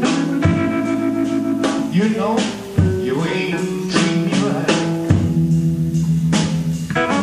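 At 6.72 s a single sharp tick cuts through the sound, broadband and unrelated to anything around it. This is a bit error spike: one flipped bit knocked a single sample far off its true value, to about -20 dBFS, before the next sample returned to normal.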